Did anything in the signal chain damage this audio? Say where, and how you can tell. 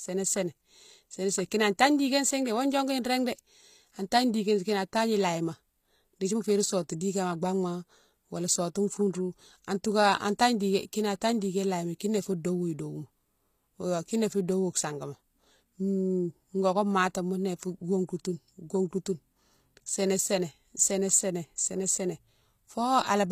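Yes, at the codec stage, across the whole clip. The treble of this speech sounds bright yet synthetic: s sounds come out gritty and lispy, and nothing is present above 15 kHz. That points to the likely cause, HE-AAC compression at a low rate around 24 kbps. The upper band is rebuilt by copying lower harmonics upward under a coarse envelope, so the overtones don't line up. A plain low-pass would sound dull instead, not metallic.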